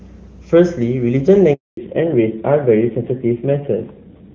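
At 1.53 s the call is handed from one network to another, and no speech frames reach the receiver while the link switches over. This handover gap lasts 240 ms, until 1.77 s. The speech cuts away almost instantly rather than fading naturally, leaves a stretch of dead silence, and resumes only when the new path is carrying audio. Whatever was spoken during that quarter-second is simply missing.

From 1.77 s to the end, the call falls back from HD Voice to an older narrowband codec. Before the switch, the AMR-WB wideband stream sounds clean and open, with faint or no coding damage, consistent with its top 23.85 kbit/s mode. After it, nothing is left above 4 kHz, and the low bit rate points to AMR-NB at about 7.4 kbit/s. The speech turns muffled, with sibilants dulled, and takes on a grainy roughness.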